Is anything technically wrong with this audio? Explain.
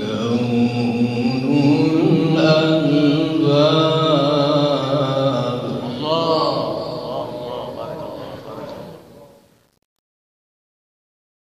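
Yes, there's truncation distortion on the fade-out at the end. From 8.73 s to 11.55 s the quiet tail gets grainy. It's worst from 9.31 s to 11.56 s. The fade stage is throwing away low bits without dither, which fits about 9-bit resolution, so as the signal shrinks toward the smallest step it collapses into coarse square steps. You hear that as gritty fizz.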